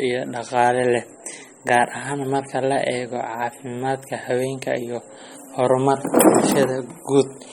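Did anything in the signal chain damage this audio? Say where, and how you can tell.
Yes. The damage sits at the codec stage and runs through the whole speech clip: a watery, swirling texture, smeared consonant onsets, and nothing above 17.2 kHz, at a bitrate near 32 kbps. This is likely MP3 compression dropping weak frequency lines frame by frame. A plain low-pass filter would cut the treble without that swirl.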